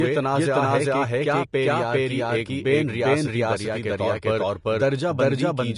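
A doubled audio track runs through the whole speech clip. A second, full-band copy sits roughly 0.4 s behind the first at about the same level, with no decay or room colour, so every syllable is answered by a dry, equally loud repeat that smears the speech into two overlapping streams. This is likely caused by the signal being captured a second time through a slower path, or by an edit that left two out-of-step copies in the mix. Vorbis compression also affects the clip from start to finish, and the damage is plainly audible. Nothing remains above 10.5 kHz, and the upper range that survives is quantised so coarsely that its detail has turned into hiss-like noise of similar energy. Consonants sound grainy, voiced tones are roughened and attacks are blurred. The pattern fits a low Vorbis bitrate, likely around 35 kbps.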